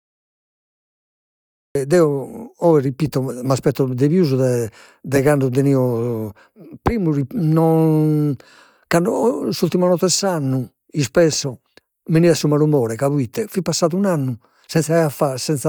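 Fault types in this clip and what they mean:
Cut-off start at 1.75 s: the file holds digital silence from the opening until 1.75 s, and then the speech appears abruptly, already under way rather than rising from a natural onset. The capture or stream evidently began late, so whatever came before that point was never recorded, and the first audible syllable is truncated mid-sound with no attack or fade-in, producing a hard edge where the signal switches on.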